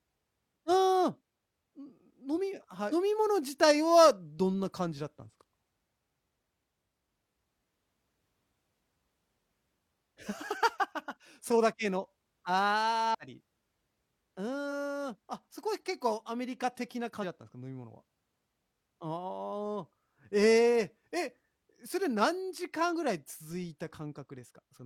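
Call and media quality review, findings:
Damaged data in a compressed stream: short chirps and blips in the speech at 2.88–2.93 s, 13.10–13.15 s, 14.68 s, 17.19–17.24 s and 22.90–22.93 s. The decoder is chewing on corrupted frames, losing sync, then grabbing the next header.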